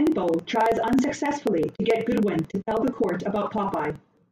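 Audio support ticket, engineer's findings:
Periodic USB or driver dropouts across the speech, 0.07 s to 4.23 s. Regular ticks every 54 ms, about 18 per second, some seventy in total. Roughly 10 ms skipped each time rather than muted, so the signal jumps and clicks. Probable component: USB bus or audio driver stalled by a recurring background task. Ticks track the signal and vanish in silence.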